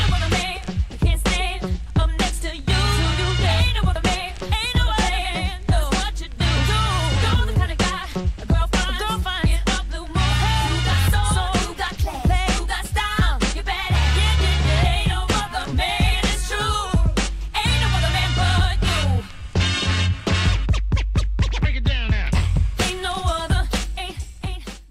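No technical faults are audible.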